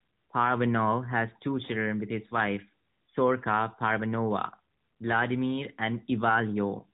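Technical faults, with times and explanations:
No faults found; the speech comes through an AMR narrowband mobile codec path with nothing audible above about 4 kHz and only the light coding texture expected of its higher-rate mode, around 12.2 kbps.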